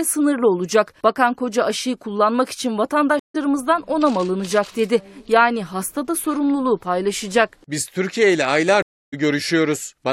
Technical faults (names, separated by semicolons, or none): stream reconnect